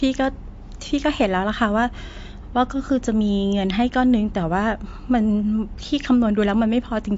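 The damage runs through the whole speech clip. Nothing is heard above 7.6 kHz, so the top of the sound is sheared off flat. Fricatives and s sounds lose their edge and turn dull. What remains has a watery, swirling texture. Faint detail seems to flicker in and out. The likely cause is MP3 compression. Starved of bits, the encoder drops the treble and discards weak frequency content. The plainly audible damage fits a low bitrate near 48 kbps.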